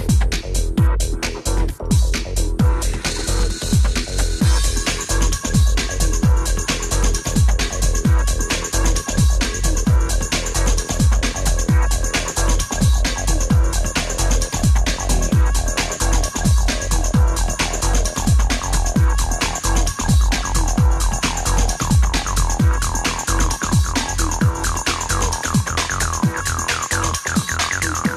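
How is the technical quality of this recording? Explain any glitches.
No glitches or dropouts heard.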